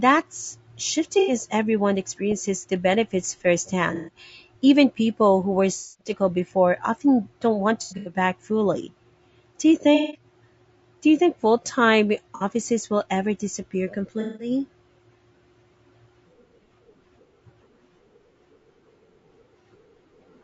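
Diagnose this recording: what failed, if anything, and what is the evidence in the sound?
Codec stage: the speech is rough and grainy throughout, with noise filling the gaps between harmonics and a thin, synthetic-sounding top band. This plainly audible damage likely comes from low-delay AAC compression (AAC-ELD), whose short frames resolve pitch poorly, consistent with roughly 32 kbps.

Network or transport stage: AAC frame loss with concealment occurs at 1.19–1.33, 3.95–4.16, 5.78–6.10 (after "people who were"), 7.82–8.14, 9.95–10.24, 12.35–12.43 (before "will ever disappear") and 14.21–14.50 s. Each gap of 60–210 ms becomes a smeared, noisy patch as the decoder rebuilds the missing audio from the last good spectrum. The 7.82 s event is broken up over about 240 ms.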